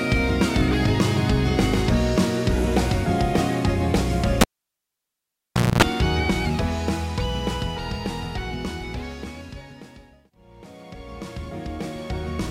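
At 4.41 s there's a classic cable pulled and plugged in: a sharp pop as the live lead comes out, then about 1.36 s of near silence with nothing connected. On the way back in, the tip touches before the sleeve grounds, so you get roughly 240 ms of 60 Hz mains buzz, and a second pop as the plug seats and the sound returns at 5.82 s.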